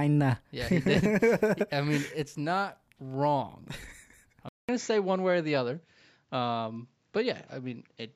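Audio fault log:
4.49 to 8.15 s: input switched to a poorer device. After a 200 ms silence, the speech loses everything above 7.6 kHz and turns duller. A faint new background noise appears, far below the speech. Loudness holds steady. Likely cause: recording moved to a narrower-band microphone.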